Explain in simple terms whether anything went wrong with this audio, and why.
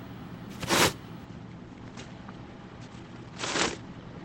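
An adaptive stream switched to a lower bitrate at 1.25 s because the connection slowed, so from there to the end the sound suddenly turns smeared, without any gap.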